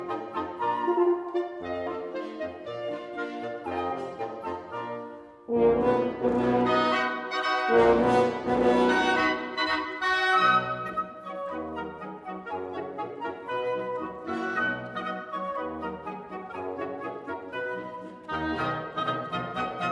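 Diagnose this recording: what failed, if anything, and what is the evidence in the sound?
No failure detected anywhere.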